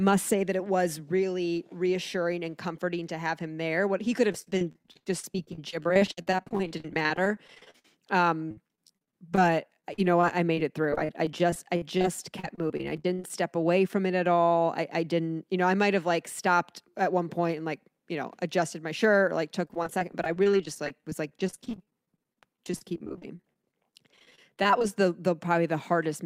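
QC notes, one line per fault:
4.32–7.96 s, 8.49–9.38 s, 9.80–12.05 s, 12.40–13.30 s and 19.65–24.84 s: repeated packet loss (robotic sound). It starts after "there what he could", recurs up to "away from it at", and returns after "my shirt or like". Dozens of holes of up to about 56 ms are each patched by looping the last audio, concealing 14–29% of each stretch. The result is choppy, with pieces missing. On a spectrogram this shows as frozen, smeared harmonic blocks with vertical seams, and the waveform shows copied cycles.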